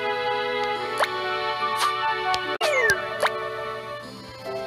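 At 2.52 s, a brief burst of damaged data in a compressed stream lasts until 2.62 s: corrupted bytes garble the decoder's reading of those frames until it regains sync. The result is a roughly 0.1 s disturbance.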